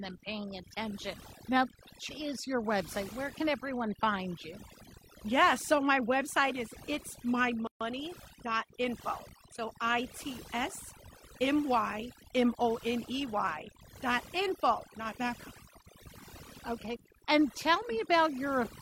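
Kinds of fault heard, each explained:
Overdone noise removal: Throughout this speech, an over-strong denoiser pushes the background down so it breaks up into twinkling specks, unlike plain muffling.
Gap at a join of encoded pieces: A 135 ms gap opens at 7.67 s with smeared edges, then speech resumes exactly where it stopped, so nothing is lost, unlike a dropout.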